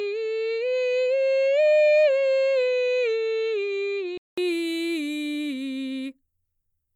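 From the top to about 4.38 s the music sounds dull and a bit quieter, with nothing above 7.6 kHz and a faint hiss well under it. Then a short gap of about 200 ms, and full bandwidth returns. That's likely an input switched from a poorer device.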